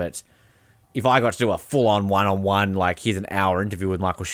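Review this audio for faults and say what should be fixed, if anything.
Nothing needs fixing; no faults can be heard here.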